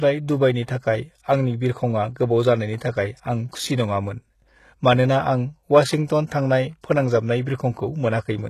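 From start to finish, the speech carries plainly audible coding damage, likely HE-AAC compression at a low bitrate, which fits roughly 16 kbps. Only the lower spectrum is coded; the treble is rebuilt by spectral band replication, copying lower bands upward under a coarse envelope, so its harmonics fail to line up with those below, and s sounds turn gritty, metallic or lispy. A spectrogram shows nothing above 12.3 kHz and blocky, repeated-looking patterns in the upper bands.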